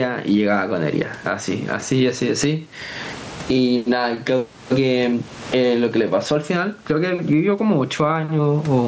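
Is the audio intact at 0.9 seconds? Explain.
No. At 0.9 seconds, as throughout the clip, there is gain pumping: the level swings by roughly 25 dB, likely because input gain is set far too high and a fast limiter clamps each loud syllable. Loud and soft parts end up closer in level, leaving the sound squashed.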